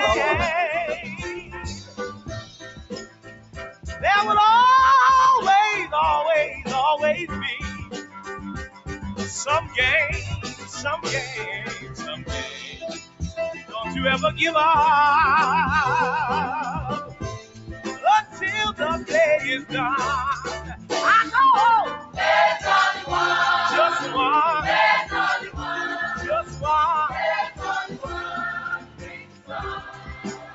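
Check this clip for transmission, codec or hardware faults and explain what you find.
The faults here come from a speech noise suppressor that stayed active on non-speech material. The call path itself is sound: nothing above 8 kHz survives, consistent with a call codec's 8 kHz bandwidth, and that limit is expected rather than a fault.

Noise suppressor applied to music or sounds, throughout: The suppressor treats sustained, steady content as background noise and turns it down, while onsets pass. Its gain swings by roughly 15 dB, so the level pumps and flutters and sustained parts thin out against the attacks that precede them.

Sound cut by the noise suppressor, at 1.4–3.86 s, 7.81–8.88 s, 10.54–10.72 s, 11.77–13.74 s, 17.05–19.73 s, 20.6–20.91 s, 21.97–22.18 s and 25.44 s to the end: In these stretches the suppressor classed the sound as noise and attenuated it by up to about 13–14 dB (about 8 dB at 10.54 s). 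Held and decaying portions sink or have their tails truncated, audibly dipping relative to surrounding material.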